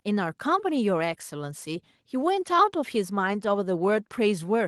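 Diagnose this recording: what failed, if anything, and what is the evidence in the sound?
Nothing failed at any stage of the chain: no dropout, click, distortion or other defect is audible anywhere in the recording.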